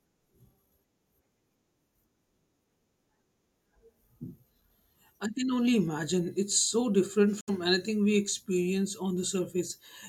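A speech clip with a Bluetooth dropout from 7.41 to 7.50 s: the sound cuts abruptly to silence just before "anything we experience", likely from a few wireless packets arriving too late. Unlike a stall, it resumes mid-flow, the missing stretch skipped rather than delayed.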